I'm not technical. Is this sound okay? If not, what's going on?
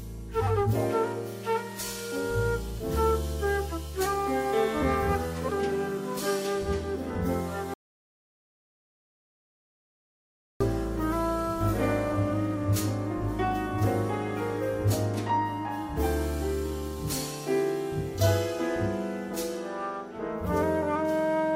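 No. From 7.74 to 10.61 seconds the sound cuts out completely. This is an audio dropout to silence. For almost three seconds there is nothing, not even background hiss. The input was likely lost briefly while recording continued. Whatever happened then is missing.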